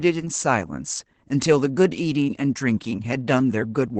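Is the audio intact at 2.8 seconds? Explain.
No. At 2.8 seconds, as through the whole clip, the speech carries Opus voice compression damage that is plainly audible. The top of the band stops near 8 kHz, so sibilants and breath lose their air, and the coarsely coded excitation gives a hoarse, slightly robotic, muffled quality. That points to the SILK linear-prediction coder running wideband, and fits a low bitrate around 12 kbps with 20 ms frames.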